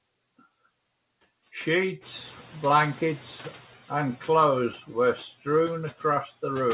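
A speech clip, carried through a narrowband call path that leaves nothing above 4 kHz, with one fault: noise suppressor catching up. The room noise jumps around 2 s, and the suppressor's estimate lags, so the noise passes with little reduction from 2.01 s, then sinks by about 6 dB over 1.6 s, settling at 3.63 s, just before "and clothes were". On a spectrogram the noise floor brightens abruptly, then fades gradually.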